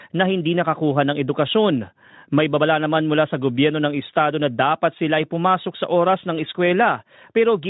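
Speech with no technical fault to report: the lowest bass is trimmed, consistent with a call's microphone processing, the audio went through a Speex encode, and any trace of that codec is faint at most.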